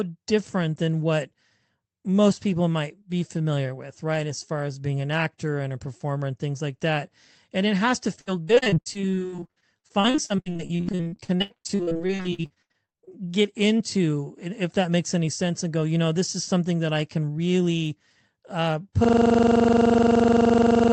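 From 8.15 s to 13.13 s, right after "it has to" and up to "get into if that", the speech goes choppy and robotic. That's repeated packet loss: short holes keep opening, none longer than 80 ms, and each gets patched by stretching the last bit of sound. Roughly 2 s of that stretch is patched audio and about as much again is just gone, so around 41% of it sits on concealment. That's why it sounds choppy and missing pieces.

At 19.04 s, just after "I can really uh", the system hang loop kicks in and runs to the end of the clip. The machine has stalled while the sound hardware keeps replaying the same 42.67 ms chunk of its ring buffer, about 23.4 times a second. At that rate it comes across as a rough buzzing stutter rather than a clean tone. The loop length fits a 2048-sample buffer. Underneath it all, the call codec path is audible as a cut-off around 8 kHz, consistent with Opus.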